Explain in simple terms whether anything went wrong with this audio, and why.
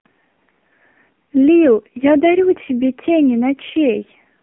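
The whole recording went through an AMR narrowband mobile codec, the kind older phone networks use. Nothing above 3.6 kHz gets through, so the speech sounds thin and muffled. The codec also squeezes it hard, which leaves a buzzy, synthetic edge throughout.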